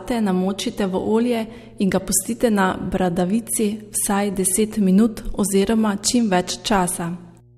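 From the first moment to the last there's a steady mains hum sitting under the speech, pitched at 60 Hz, so a North American-style supply. It's roughly 30 dB below the talker, quiet relative to the voice. Something like a ground loop or a transformer close to the cabling has let the power line bleed into the signal, leaving that constant low drone with a bit of harmonic buzz on top.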